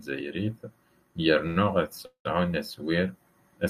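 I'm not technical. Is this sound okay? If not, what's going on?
No. There are two small hiccups in this speech where the sound briefly stops moving forward.

At about 1.47 to 1.65 s there is a short stall from a late packet. A piece of the call arrived late, so the last bit of sound is stretched for about 84 ms to fill the wait. The speech then picks up where it left off, with nothing cut out. It sounds like a sound held slightly too long.

At about 2.06 to 2.26 s there is a call audio freeze, likely from data being held up on the way to the listener. The sound hangs for about 193 ms, and roughly 110 ms of that is silence. It is longer than the first hiccup and fades into quiet instead of only stretching. Once it ends, the speech resumes without losing anything.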